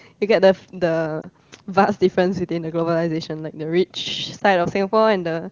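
Brief dips or warbles at 1.21 to 1.26 s and 4.39 to 4.43 s are lost AMR speech frames: a single corrupted 20 ms frame each time, concealed by reusing the previous frame's settings at falling gain, within otherwise clean-sounding wideband AMR coding.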